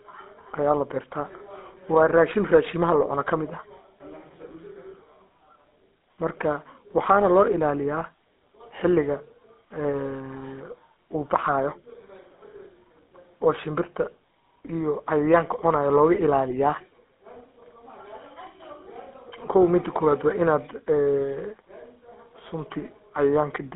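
GSM full-rate codec damage runs through the whole speech clip, with a roughness that fits a 13 kbps GSM line. The codec rebuilds the voice from a vocal-tract model driven by sparse regular pulses, leaving a buzzy, gravelly texture in a narrow 200 Hz to 3.7 kHz band, with nothing above 3.8 kHz.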